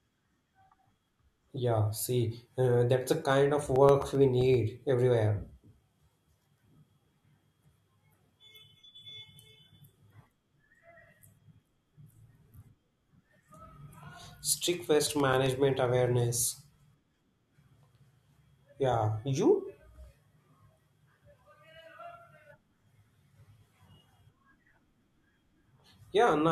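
CD scratch ticks sound from 3.23 to 4.54 s and again from 15.07 to 15.99 s, at roughly eight or nine a second. Each marks an unrecoverable read per disc turn, leaving a patch a few milliseconds long, seen as evenly spaced thin vertical streaks and tiny waveform notches.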